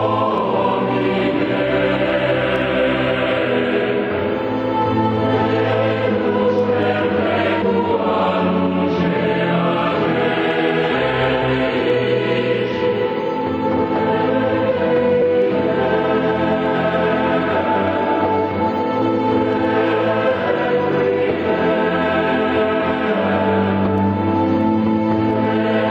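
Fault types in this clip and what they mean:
Gain pumping: the level ducks by around 10 dB under every loud sound, flattening the level, likely from gain set far too high feeding a fast limiter. Unlike a noise gate, the background rises rather than cutting to silence.
Audio missing between chunks: at 11.42 s and 15.22 s the sound skips, about a fifth of a second lost each time and joined with no gap, which fits 4-second processing chunks. Unlike a dropout, there is no silence left behind.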